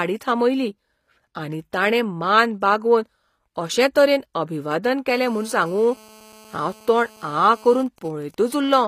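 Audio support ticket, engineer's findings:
HE-AAC compression, throughout. Plainly audible codec damage: gritty, metallic treble on s sounds; nothing above 15.5 kHz. Likely spectral band replication rebuilding the top band from copied lower bands, misaligned harmonics at the crossover. Damage level points to a low bitrate, around 24 kbps.

GSM phone buzz, 5.10 to 7.83 s. Hard, raspy 217 Hz buzz with many harmonics, about 26 dB below the speech, steady and unrelated to the signal. Nearby 2G handset in a call; its radio bursts are rectified by the audio circuit.

GSM signalling bursts, 7.86 to 8.59 s. Even ticks with a longer 217 Hz buzz twice a second, roughly 25 dB below the speech. Nearby 2G handset, call still open with its user silent, so it sends only sparse burst groups, rectified into the audio path.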